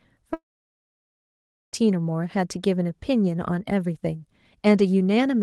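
From 0.33 to 1.75 s the speech cuts out, most likely from a long network dropout. The receiver stretches the last sound into a short fading buzz, then there's about 1.3 s of near silence, and the audio picks up again with roughly 1.4 s missing.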